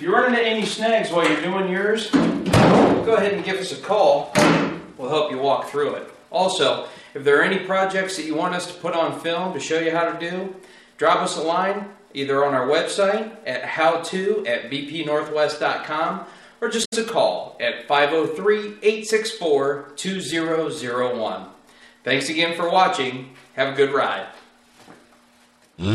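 Damaged data in a compressed stream at 16.81–16.93 s: corrupted frames make the decoder lose sync and hunt for the next header, leaving a brief glitch.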